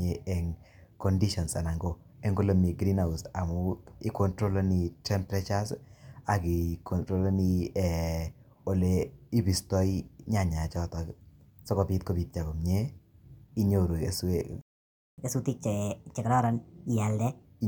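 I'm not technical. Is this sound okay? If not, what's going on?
No. At 14.61 s the speech goes silent for just over half a second, a playback stall, likely because the player ran short of data. From 15.18 to 17.44 s comes catch-up at higher speed: the speech plays 1.25 times faster and noticeably higher, unlike a steady pitch fault, since it returns to normal afterwards.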